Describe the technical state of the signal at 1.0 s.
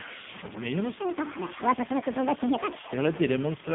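At 1.0 s the signal sits just inside a section at the wrong speed that runs from 0.99 s to 2.93 s. Playback runs about 1.63 times too fast, so pitch rises by roughly ten semitones together with the tempo, and the speech turns high and hurried for those two seconds. The jump at 0.99 s is abrupt, which points to a section likely fitted to the wrong clock by an editor or player rather than to a gradual drift.

The same moment also carries AMR narrowband mobile codec damage, present across the whole clip. The band is confined to roughly 150 Hz to 3.6 kHz, with nothing above 4 kHz. The coding damage is heavy, consistent with a low AMR-NB mode around 5.9 kbps, where a few excitation pulses per subframe drive a vocal-tract model. The result is a buzzy, synthetic quality, and the sped-up section is coded just as coarsely.

Underneath both sits low bit depth without dither. The quantisation error tracks the signal and lies not far below it, roughly 10 dB down, which fits a 5-bit word likely produced by truncation. 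It is heard as a coarse grain that follows every syllable, and the quietest parts sputter between adjacent steps instead of fading smoothly.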